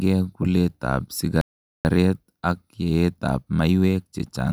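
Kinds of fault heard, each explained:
Playback stall: the speech halts mid-flow at 1.41 s and the output stays silent for about 0.44 s, until 1.85 s, after which the speech carries on. The likely cause is the player running short of buffered data or its audio thread being held up. A packet-loss dropout leaves only a brief hole or smeared fill of a few tens of milliseconds, but this is one long, clean silence before the sound resumes.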